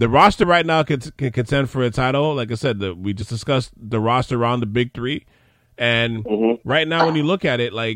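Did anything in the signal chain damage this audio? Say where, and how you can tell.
Yes. The damage happened at the codec stage, from damaged data in a compressed stream. Three brief bursts break into the speech: a blip at 0.42 s, another from 3.21 to 3.23 s, and a third from 6.55 to 6.57 s. Each lasts about 20 ms and is a glitch, not program material. Corrupted bytes made the decoder misread those frames and lose sync. It output garbage until it found the next valid frame header.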